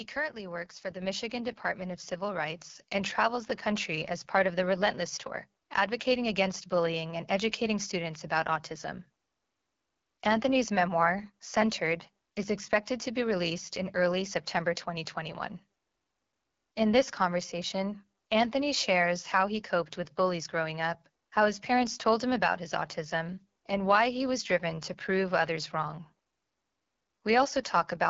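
Speech runs through the AMR wideband (HD Voice) codec for its whole length, and the coding damage is plainly audible. The sound has a rough, raspy texture that fits AMR-WB's 8.85 kbit/s mode, one of its two lowest rates, where the pulse-driven vocal tract model has too few bits to shape the voice cleanly. Nothing is present above 7.5 kHz, and the top band above 6.4 kHz is filled with shaped noise rather than real detail. That noisy top edge, together with the rasp, is what marks this as low-rate AMR-WB and not just a plain low-pass filter or a narrowband phone line. Early on, the microphone volume is stepped up three times: at 1.02 s by about 5 dB, at 2.58 s by about 4 dB, and at 3.69 s by about 1 dB. Each jump is instantaneous, and the background rises along with the voice. This shows the input gain itself was raised in one step, not that the talker got louder or a compressor slowly rode the level.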